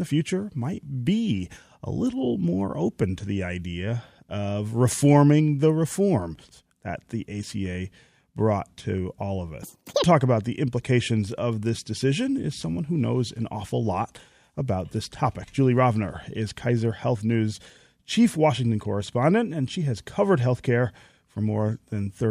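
Audio read two samples at a time (double speed) occurs from 9.63 to 10.04 s: the speech is taken in pairs of samples as if each pair were one frame, so it races at 2x speed and jumps an octave higher.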